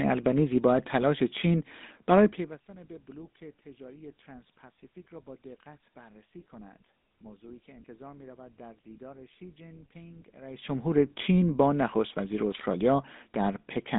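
From start to finish the speech carries the sound of the GSM full-rate codec, the original mobile-phone coder, with damage that's plainly audible. It rebuilds the voice from a vocal-tract model fed by a sparse pulse train, which gives that buzzy, gravelly grain, and the rough texture fits a 13 kbps stream. The band is squeezed to a phone line of roughly 200 Hz to 3.7 kHz, with nothing at all above 3.8 kHz, so it sounds boxy and dull.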